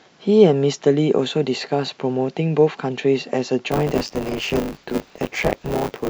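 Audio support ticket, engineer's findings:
Buffer tearing, 3.71 s to end. 100 Hz robotic buzz on speech; writer and reader cross each 10 ms period, about a third holding audio around 20 ms stale.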